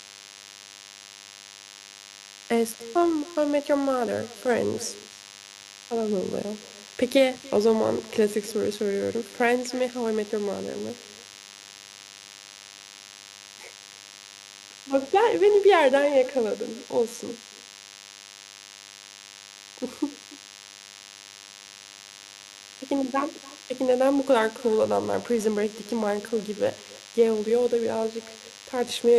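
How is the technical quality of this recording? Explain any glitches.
Technical quality is compromised by two problems that run the whole length of the speech.

First, there's a DECT cordless phone buzz from start to finish. A DECT handset or base nearby is firing radio bursts 100 times a second, and something in the audio chain is rectifying them into the signal. You hear it as a thin, steady, edgy buzz at 100 Hz with lots of harmonics stacked on top, sitting roughly 20 dB under the speech, so it never goes away between phrases.

Second, there's echo with no canceller, also throughout. The far end is playing the call out loud, their mic is catching it, and nothing is subtracting it, so the talker's own speech comes back after the network round trip, around a third of a second late. That returning copy is about 21 dB down, and it sounds thinner, trailing every phrase like a faint shadow.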